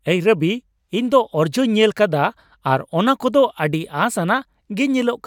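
No technical faults occur at any point in the speech, so there is nothing to place in time order.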